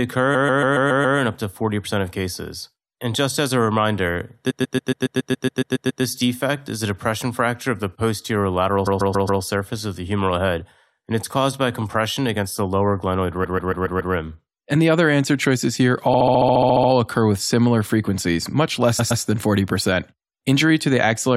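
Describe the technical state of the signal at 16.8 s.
At 16.8 s the signal sits inside a run of repeated frames spanning 16.13 to 16.89 s. A block of about 70 ms, consistent with three compressed frames, plays 11 extra times, adding 0.77 s. It sounds like a rapid stutter. A spectrogram shows identical 70 ms tiles.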